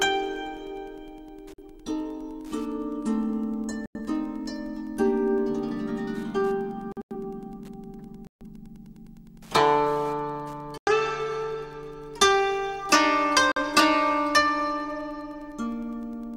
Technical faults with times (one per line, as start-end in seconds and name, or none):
0.00-16.36 Wi-Fi interference
1.54-1.64 corrupt frame muted
3.86-4.01 corrupt frame muted
6.92-7.15 corrupt frame muted
8.27-8.47 corrupt frame muted
10.78-10.90 corrupt frame muted
13.52-13.61 corrupt frame muted